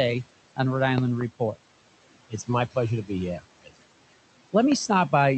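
Noise suppressor artifacts run through the whole speech, pulling steady noise down about 17 dB so the room noise sinks between phrases and rises back underneath. Loud pops land at 0.98 to 1.23 s, a double pop roughly 20 dB over the speech, then a single one at 4.72 to 4.74 s, likely sharp voltage glitches from a plug, switch or static.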